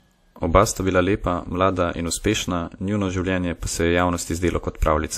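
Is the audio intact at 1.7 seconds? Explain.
No. At 1.7 seconds, as throughout the speech, there is transcoding between lossy codecs, likely an MP3 pass followed by WMA re-encoding at around 64 kbit/s. The second codec spends bits on the first's artefacts and adds its own, so the different artefacts are heard together, with nothing above 15.7 kHz.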